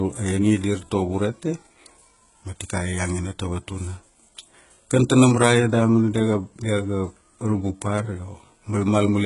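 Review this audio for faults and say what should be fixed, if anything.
Throughout the speech, s sounds come out gritty and lispy, the treble has a synthetic metallic sheen, and nothing survives above 11.1 kHz. This is likely heavy HE-AAC compression, fitting a bitrate around 12 kbps, where copied low bands stand in for the real treble and their harmonics misalign. Encode at a higher bitrate or with plain AAC so the upper spectrum is coded rather than replicated.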